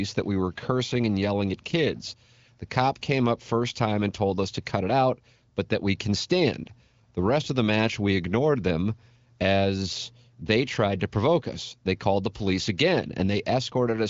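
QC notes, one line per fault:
No faults heard anywhere in the speech.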